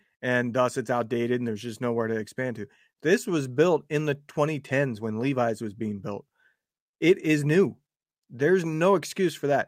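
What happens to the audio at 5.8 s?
Nothing goes wrong at 5.8 s; the speech carries on intact through that moment, with no dropout, click, distortion or other fault.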